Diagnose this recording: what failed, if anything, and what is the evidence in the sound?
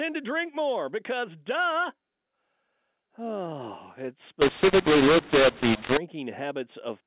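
The fault sits at the codec stage: a mu-law and A-law mix-up between 4.42 and 5.97 s, where samples encoded as A-law are decoded as mu-law. Each 8-bit code maps to the wrong curve, so the speech turns harsh and gritty, and the gaps fill with hiss as near-silent codes land well above zero. On the waveform the envelope looks warped and the pauses are no longer flat. On the spectrogram broadband noise fills the whole band up to the 4 kHz telephone ceiling.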